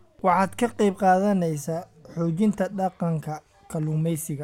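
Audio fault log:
No faults detected anywhere in this speech recording.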